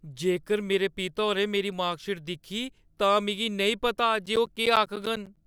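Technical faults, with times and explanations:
4.26 to 5.37 s, periodic USB or driver dropouts: something stalls the USB link or audio driver on a steady 0.1 s cycle, and each stall costs around 10 ms of the speech stream, which the output fills with silence. Roughly ten such gaps land across this stretch, each slicing a short hole out of the speech, so the end of the clip carries an even train of ticks at ten per second, present only where sound is present.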